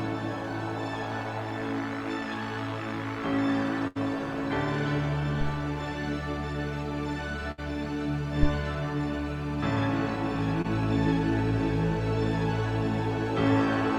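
At 3.87 s the sound stops moving forward. For 80 ms the last sound is held and turned down, and then the audio resumes with about 80 ms missing. This is a burst of packet loss: several consecutive packets arrived too late or not at all. The receiver stretched the final fragment it had into the hole while fading it out, then skipped ahead. The same thing happens at 7.51 s, where roughly 63 ms of held, fading fill covers a jump of about 60 ms.

At 8.43 s a deep thump cuts in and dies away almost at once, decaying over about 19 ms, with the whole event over by 8.52 s. That is a phantom power thump. Switching phantom power or another supply on a live input sends a DC step through the coupling capacitors. The preamp passes it on as a single low-frequency knock.

Around 10.62 s there is a brief smear, a momentary wobble lasting only a few hundredths of a second before the sound settles back. 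This is a short concealed packet loss. About 20 ms of audio never reached the decoder in time. The receiver filled it with roughly 23 ms of synthesised continuation, extrapolating from the preceding sound, and then crossfaded back into the real signal.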